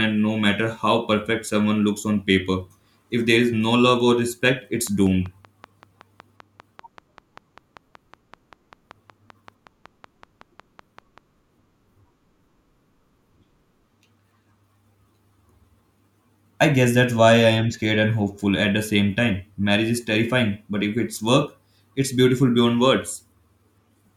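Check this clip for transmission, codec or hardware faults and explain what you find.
One hardware-type fault is present. Train of clicks, 4.87 to 11.19 s, just after "love or respect it's": likely interference or a faulty connection injecting regular pulses, about five per second, roughly thirty in all, as loud as the speech, ticking through pauses too.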